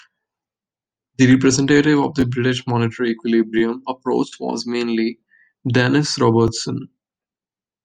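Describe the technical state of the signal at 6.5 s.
At 6.48 s there is a repeated buffer. New audio arrived late, so the last block played once more. It lasts about 12 ms, which fits a 512-sample buffer. The doubled piece is heard as a brief click with a hard join. Almost nothing is lost.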